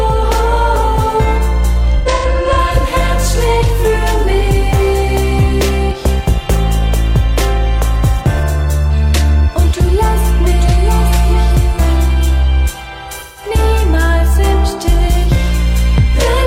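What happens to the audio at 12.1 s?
A block of digital silence occurs at 12.12 s. For about 0.32 ms, a short stretch of samples drops to silence and then resumes, with no fade on either side. The waveform cuts straight out and back, and at this length the two hard edges merge into a single brief tick rather than an audible hole.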